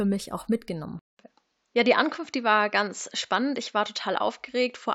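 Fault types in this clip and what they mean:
Input switched to a poorer device: Just after "mich auch", at 0.99 s, the speech drops out for about 0.2 s and returns duller and boxier, with nothing above 7.6 kHz and a faint new background noise sitting far beneath the speech, while loudness stays roughly unchanged. The thinner tone then holds to the end of the clip. The likely cause is the recording switching mid-take to a narrower-band microphone or headset input with its own noise.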